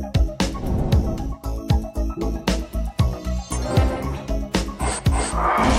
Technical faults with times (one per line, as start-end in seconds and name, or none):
none